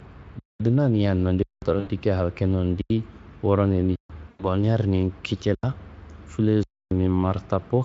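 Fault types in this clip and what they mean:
Underrun with held sample: the output buffer emptied and the converter froze on its last value, so the speech stops dead on a flat, non-zero level, with no buzz or fade. This happens six times, lasting 85 to 280 ms, with audio missing on return.
VoIP packet loss concealed by the speech codec: 80 ms at 1.79 s and 100 ms at 4.29 s were lost, and the decoder stretched the last pitch and filter into a fading buzzy tone or coloured noise. The voice stays weak after packets return.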